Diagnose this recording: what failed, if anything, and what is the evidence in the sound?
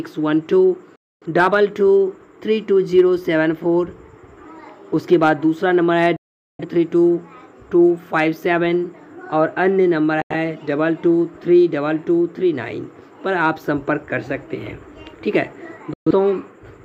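The digital broadcast reception failed, causing dropouts: the audio mutes with a quick fade of about 3 ms at 0.96 s, 6.16 s, 10.22 s and 15.93 s, for roughly 0.3, 0.5, 0.13 and 0.17 s. The holes come in steps of about 43 ms, which fits whole lost frames muted by the receiver until good frames returned.

Hard clipping occurs at a gain or converter stage, with peaks cut flat at 1.39 s, 2.98 s, 5.13 s, 5.99 s, 8.18 s and 13.44 s. The overdrive is about 1 to 4 dB, worst at 1.39 s, and produces brief harsh crackle as the squared-off peaks add high harmonics.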